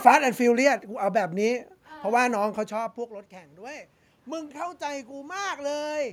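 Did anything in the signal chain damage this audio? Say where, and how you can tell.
Yes. From 2.41 s to 6.08 s, voice and room noise swell together by about 7 dB. That is automatic gain rising in call processing: after the talker moved away near 2.5 s, the input dropped about 21 dB, and the gain control slowly compensated.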